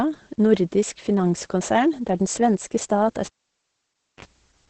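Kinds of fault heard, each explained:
Opus voice compression: the encoder has run in its SILK speech mode at what sounds like about 10 kbps, keeping only a wideband range and coding the excitation coarsely, so nothing survives above 8.6 kHz and the speech comes out muffled, hoarse and faintly robotic throughout.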